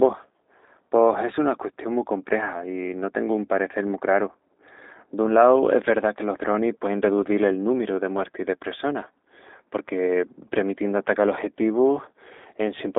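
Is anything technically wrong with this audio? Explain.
Yes. Throughout, the speech carries G.729 codec damage: a 250 Hz to 3.7 kHz band and rough, buzzy synthetic texture from pulse-based rebuilding, which fits 8 kbit/s G.729A, not simple band-limiting.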